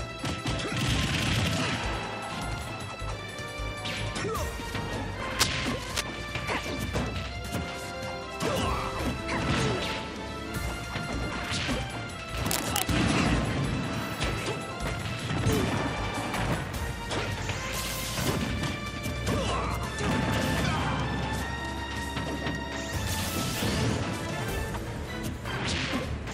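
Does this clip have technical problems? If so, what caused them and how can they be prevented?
Yes. Two bursts of cable scratch noise occur, from 5.39 to 6.02 s and from 12.46 to 12.83 s. Each is a dense, uneven rustling roughly as loud as the audio itself. The likely cause is a worn cable, connector or control being moved, so its contact resistance jumps about rapidly and injects irregular noise into the signal path. Replace or clean suspect cables and jacks, and secure them so they don't flex during recording.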